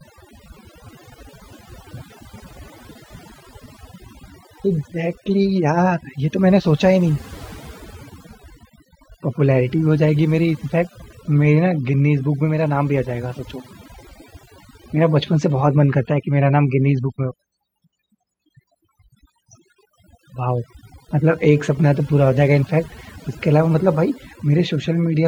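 A speech recording with overdone noise removal running from start to finish. The noise reduction was set so aggressively that individual frequency bands close to its noise estimate are pulled far down or cut out entirely, and the quieter components of the voice are removed along with the noise. Between phrases the background drops and breaks up into twinkling, warbling specks.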